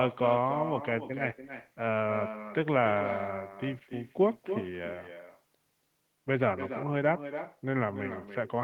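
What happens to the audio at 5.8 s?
At 5.8 s you're hearing an echo with no canceller, and it's there for the whole clip, not just that moment. The far end is playing the call out of a loudspeaker, its mic picks it back up, and nothing strips it out. So the speech returns after the network round trip, around a third of a second later and about 10 dB down, as a thinner shadow trailing the talker's speech.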